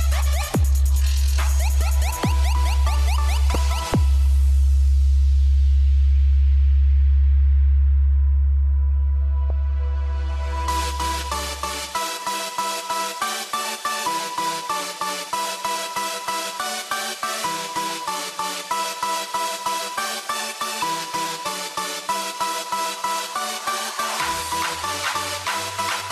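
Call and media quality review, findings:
Short blip at 3.54 s, then again at 9.50 s, lasting 14 ms and 4 ms. Probable component: compressed stream or decoder input. Damaged data in a compressed stream: corrupted bytes in those frames make the decoder misparse or drop them, lose frame sync and resume at the next valid header. Two isolated events with no periodic pattern, pointing to transport or storage corruption, not a steady encoder defect.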